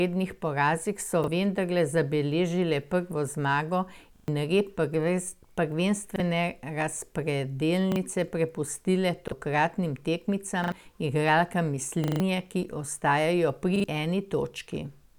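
Repeated buffer stutters in this speech at 1.24, 4.16, 6.16, 7.92, 9.28, 10.64, 12.04 and 13.76 s. New audio arrived late, so a roughly 40 ms chunk replays one to four times with hard joins. The longest, at 12.04 s just before "ki ostajajo", swallows about 150 ms of the speech.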